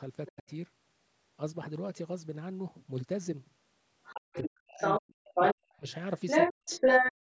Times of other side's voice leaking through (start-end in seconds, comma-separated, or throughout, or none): 0.26-0.43, 4.03-7.12